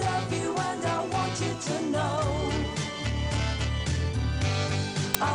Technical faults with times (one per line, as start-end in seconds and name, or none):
5.14 file tags played as audio